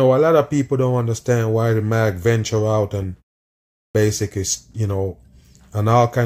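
At 3.62 s, after a 0.48 s pause, a clipped start swallows 0.33 s while the output wakes. The waveform leaps abruptly out of flat silence.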